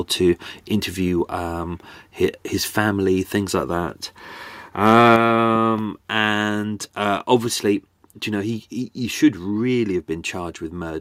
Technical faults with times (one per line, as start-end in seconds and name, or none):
4.86-4.94 microphone overload
5.16 microphone volume stepped down
5.56-5.81 loud pop